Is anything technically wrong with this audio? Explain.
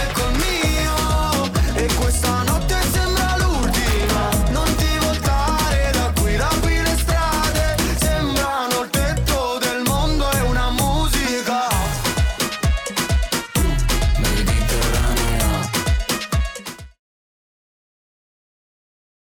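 Yes. Hard clipping runs through the whole clip. The signal was driven about 3 dB past what one stage could carry, so a few percent of samples hit the ceiling and their peaks were sliced flat. Those squared-off tops add harmonics high in the spectrum, heard as a gritty crackle on each loud moment rather than a constant fuzz. It persists until the sound eases out in a gentle fade from around 16 s to 17.01 s.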